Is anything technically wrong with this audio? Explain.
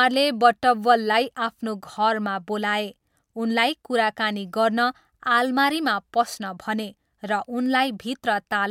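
No, nothing technically wrong turns up anywhere in this speech recording.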